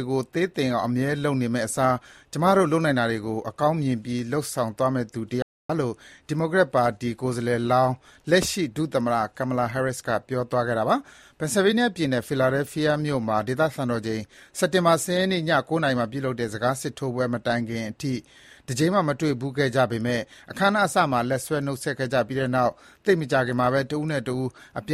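At 5.42 s the audio cuts out abruptly in mid-flow and stays silent for about 270 ms, returning at 5.70 s. This playback stall is likely the player running out of buffered data or its output thread being briefly blocked.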